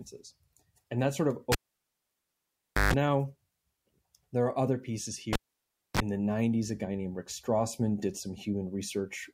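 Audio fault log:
1.52–2.94 s and 5.33–6.00 s, cable pulled and plugged in: a live lead is yanked out, giving a pop and near silence for 1.36 s, then 0.62 s. Reinsertion brings 50 Hz mains buzz (145 ms, then 30 ms) while only the tip touches, then another pop.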